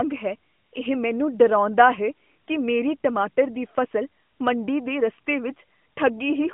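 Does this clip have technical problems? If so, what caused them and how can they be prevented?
No, the speech carries no technical faults; it has the narrow telephone band of the AMR narrowband mobile codec, with nothing above about 3.6 kHz and only light coding texture, which fits the codec's top 12.2 kbps mode.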